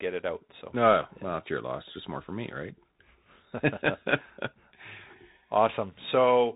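Speech heard throughout through a Bluetooth CVSD headset codec: nothing passes above 3.8 kHz, and the plainly audible granular, scratchy distortion of one-bit delta coding, which fits a 64 kbps link, separates it from a clean low-pass filter or the wider-band mSBC codec.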